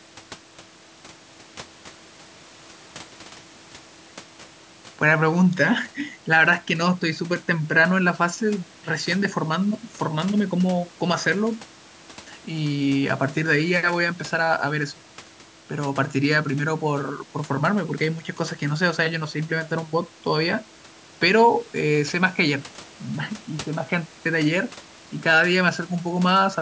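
Speech recording with no technical faults to report.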